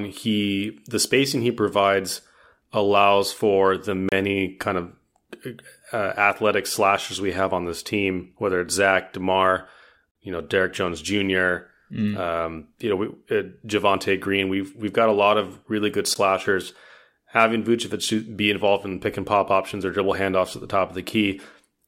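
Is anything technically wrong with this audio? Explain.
Yes. The speech briefly drops into hard-edged silence three times, about every 6 s: at 4.09 to 4.12 s (31 ms), between "provides allows for the" and "kind of"; at 10.11 to 10.15 s (43 ms), just before "you know"; and at 16.14 s (14 ms), right after "lot of really good". These are gaps between stream segments. The regular spacing fits 6-second segments whose timestamps don't quite meet, so the player fills each hole with silence, though no audio is lost.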